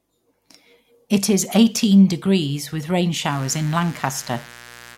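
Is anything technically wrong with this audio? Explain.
Yes. From 3.28 s to the end, after "eighteen degrees with rain", a raspy mains buzz sits roughly 25 dB below the speech. Switching spikes twice per 60 Hz cycle spray harmonics into the kilohertz range, so it sounds edgy and bright rather than like a smooth low hum.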